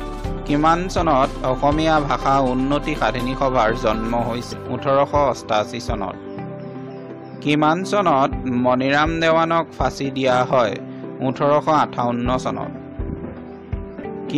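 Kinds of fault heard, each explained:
Damaged data in a compressed stream: corrupted bytes make the decoder misread frames and lose sync until it finds the next header. This causes brief blips at 4.52, 6.89 and 14.04 s, seen as thin broadband vertical streaks on a spectrogram and abrupt jagged breaks in the waveform.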